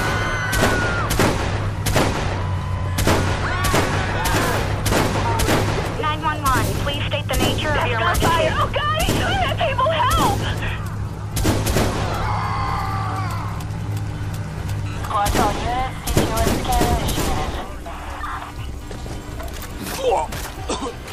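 Computer activity noise runs throughout the clip. It comes across as a buzzing, chirping layer with a pulse rate of roughly 200 Hz, sitting roughly 30 dB below the sound. It rises and falls with the load on the machine rather than with the audio itself. As the processor, graphics card or mouse draw changing current, the ground shared with the audio circuitry shifts, and that fluctuation leaks into the signal path as interference.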